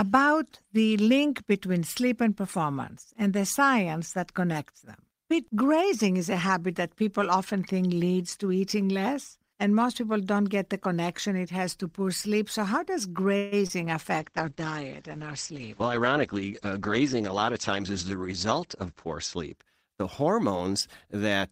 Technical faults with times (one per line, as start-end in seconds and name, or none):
13.37-13.63 call audio freeze
13.67-13.71 short concealed packet loss
14.21-19.61 call bitrate drop
15.53-17.80 jitter buffer speed-up